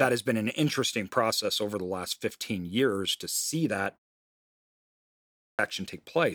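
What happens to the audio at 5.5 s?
At 5.5 s the audio is inside a clipped start after a pause. The output device slept through 1.14 s of silence and needed time to wake, so 5.04 to 5.59 s is swallowed and speech resumes abruptly. The waveform leaps from flat silence to full level, with no visible onset.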